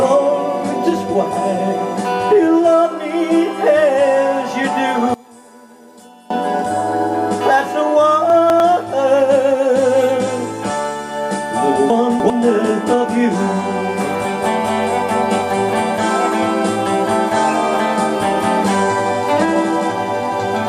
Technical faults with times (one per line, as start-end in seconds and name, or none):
5.14-6.30 one channel inverted
8.30-8.60 chunks out of order
11.90-12.30 chunks out of order